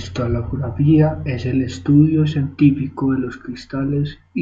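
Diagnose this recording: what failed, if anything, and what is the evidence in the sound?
Nothing seems to have gone wrong anywhere along the chain here, since the speech carries on without a single audible event pointing to any stage misbehaving.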